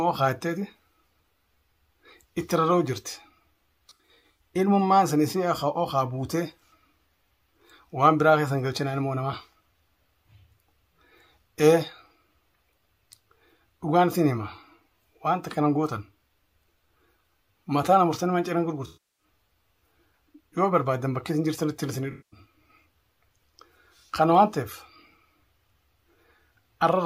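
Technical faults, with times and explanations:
3.89–4.41 s, 18.86–19.24 s, 22.11–22.40 s: AAC frame loss with concealment. About 280, 320 and 213 ms of frames are missing; in the first patch they're scattered, the longest run under a tenth of a second. The decoder rebuilds each gap from the last good spectrum, so the sound turns smeared, noisy or phasey. On a spectrogram it shows as blurred, frozen-looking bands; on the waveform the envelope goes flat.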